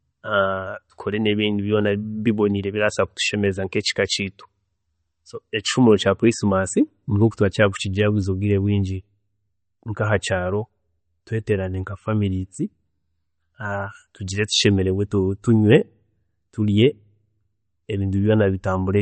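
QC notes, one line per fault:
Throughout, MP3 compression: treble stops near 8.4 kHz and weak detail flickers between frames, giving a watery, swirly speech sound, likely from encoding around 34 kbps.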